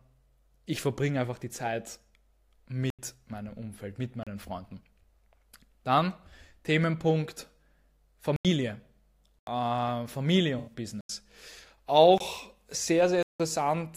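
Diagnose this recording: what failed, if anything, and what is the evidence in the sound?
The output buffer stage failed. At 2.90–2.99 s, 8.36–8.45 s, 9.39–9.47 s and 11.01–11.09 s the speech drops into blocks of digital silence of 85 ms each, which fits a 4096-sample buffer at 48 kHz left unfilled. At 13.23–13.40 s the gap lasts 171 ms, two such buffers. Shorter holes follow at 4.23–4.27 s (34 ms) and 12.18–12.20 s (24 ms). Each cuts abruptly to zero and back.

The codec stage also failed. AAC frame loss with concealment occurs at 10.58–10.73 s, where about 85 ms of coded audio went missing, consistent with four lost 1024-sample frames at 48 kHz. The decoder rebuilt the gap from the last good spectrum instead of muting it. The speech there does not go silent. It turns briefly smeared and noisy, and the patch extends slightly past the lost frames as the decoder recovers.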